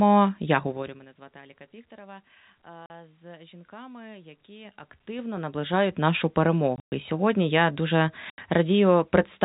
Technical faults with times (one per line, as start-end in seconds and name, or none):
0.64-1.08 zipper noise
2.86-2.90 packet loss filled with silence
6.76-6.92 packet loss filled with silence
8.30-8.38 packet loss filled with silence